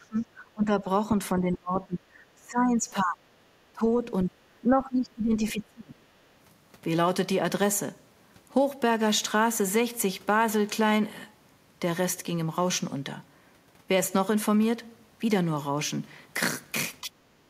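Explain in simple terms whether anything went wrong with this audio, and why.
Yes, the talker's voice repeatedly sinks, thins out or breaks into pieces at 0 to 0.86, 1.33 to 3.3, 3.72 to 4.35 and 4.65 to 6.0 seconds, with a brief dip again at 17.01 to 17.12 seconds. This is speech suppressed in double talk. Both sides were likely speaking at once, and the call's echo canceller, unable to tell this voice from the other side's sound coming through the loudspeaker, turned everything down together.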